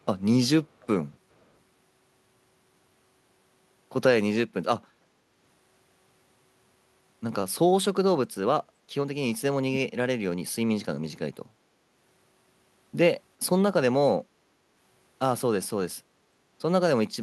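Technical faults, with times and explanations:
0.80–0.87 s and 1.40–1.46 s, echo leak: brief, very faint delayed copies of the speech arrive about 423 ms late. Likely a far-end echo canceller letting residue through.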